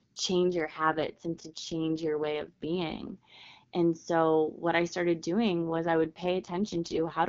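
Speech over AMR-WB (HD Voice) suffers two AMR rate drops, from 0.52 to 3.17 s and from 5.52 s, after "so what I started", to the end. The band stays intact and there's no gap, but the sound turns rough and raspy, consistent with a fall from 23.85 to 6.6 kbit/s. A spectrogram would show smeared, noisier harmonics in those spans.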